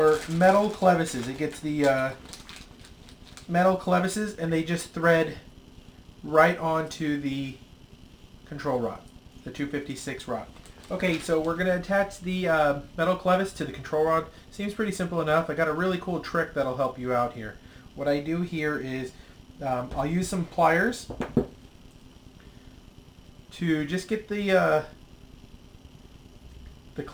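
Crude rate conversion runs throughout. The grit fits a change from 48 kHz to 44.1 kHz made by simply keeping the nearest sample, with no filter. Skipped samples create shifted, inharmonic copies. They sound like a gritty fizz following loud and high sounds, roughly 30 dB down.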